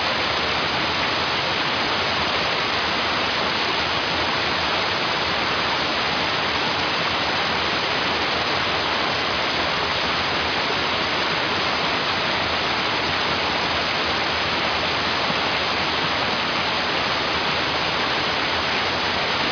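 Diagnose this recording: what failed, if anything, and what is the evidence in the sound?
Nothing failed: no stage in the chain, from capture through to playback, leaves any audible mark on this recording.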